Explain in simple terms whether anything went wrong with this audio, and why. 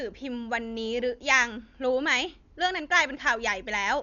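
Yes, something's off for the whole clip: the speech sounds dull and muffled, with nothing above about 7 kHz, plus a rough, fluttery hiss clinging to it. That's heavy damage, most likely from Dolby Digital compression squeezed hard, where the encoder drops detail and fills the gaps with noise.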